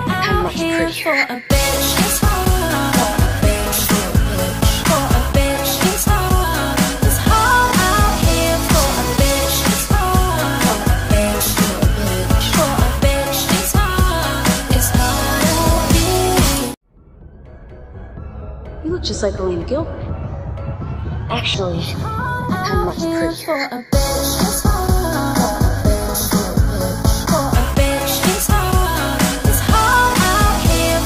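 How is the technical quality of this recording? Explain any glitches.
One glitch stands out. From 21.54 to 27.54 s there is channel delay, heard as comb filtering. One channel runs roughly a fifth of a millisecond late, and summing to mono cancels evenly spaced frequencies, the first near 3 kHz. The sound turns hollow and phasey.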